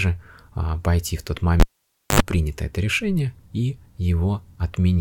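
At 1.6 s the cable is pulled and plugged in: a pop, about 0.55 s of near silence, then a 50 Hz mains buzz lasting 76 ms before a second pop restores speech at 2.2 s.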